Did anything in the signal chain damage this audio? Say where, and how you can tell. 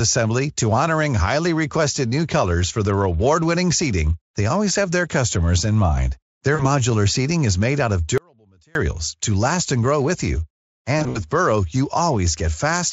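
Yes. There is VoIP packet loss concealed by the speech codec at 6.55 to 6.67 s and again at 10.99 to 11.26 s, just after "and grow with you". This is network damage. In the first event about 40 ms of audio goes missing, which fits two lost frames. In the second, 100 ms is lost across a 160 ms stretch, and the longest unbroken run is 60 ms. The decoder fills each hole by extending its last pitch and spectral shape at falling gain, so the sound smears into a buzzy or coloured, fading fill. Because each frame depends on the one before, the sound stays weakened or distorted for a short time after packets return. The Speex stream, at 34 kbps, carries it all.

There is also an audio dropout to a faint residue from 8.18 to 8.75 s, between "made out of" and "to last and grow". The wanted signal vanishes for about 570 ms and then returns. The gap is not dead silence but a faint remnant about 35 dB below the normal level. 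The cut in and out is abrupt, unlike a pause or a fade, which points to a break upstream while the later path stayed live. That is likely a momentary loss in the capture or transport feed.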